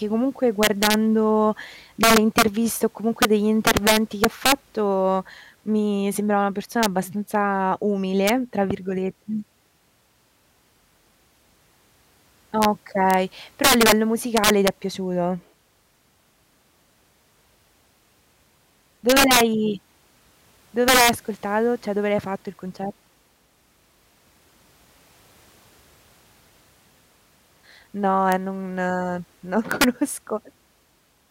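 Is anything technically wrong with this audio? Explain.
Yes. Throughout this speech there's integer overflow: the signal runs about 8 dB too hot for the integer range, and instead of being limited, any peak that crosses full scale wraps around to the opposite sign. It only catches a small fraction of samples, well under one percent, so you hear it on the loudest moments as sudden, violent cracks, far harsher and spikier than ordinary clipping would sound.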